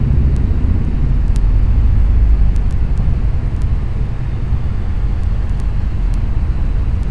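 Playback is running at a lower sample rate than the recording, with no conversion between them, a wrong sample rate fault present from start to finish. The ratio fits audio captured at 32 kHz being clocked out at 22 kHz. Every event in these sounds therefore unfolds at 0.69 times its true speed, and pitch falls with it by 6.45 semitones, so the sounds come across as heavier, duller and draggingly slow throughout.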